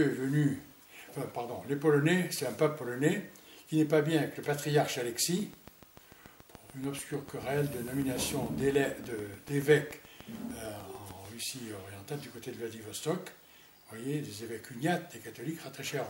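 From 5.40 to 11.26 s, a steady train of clicks ticks at 6.8 per second, about forty, peaking around 5 dB above the sound, likely interference from nearby equipment.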